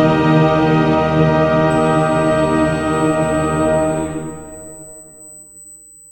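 From about 1.70 s onward there's a USB whine, a thin, steady high tone sitting at 8 kHz that runs right through to the end. It comes from the USB bus pulling current in 125-microsecond microframes, and that rhythmic draw leaks into the audio path through the power or ground. It stays locked at one pitch and sits roughly 25 dB under the audio, so it's a faint, ever-present whistle.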